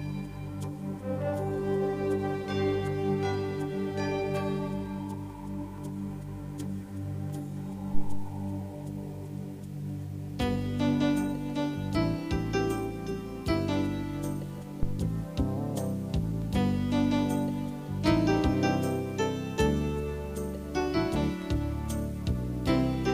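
A deep, low thump lands at 14.83 s and dies away by 15.04 s, peaking at about -16 dBFS and falling off quickly, with most of its energy gone within about 47 ms. This is a phantom power thump: the supply on the live input was switched, and that sudden DC step passed through the coupling capacitors as a single low-frequency pulse before the circuit settled back to rest.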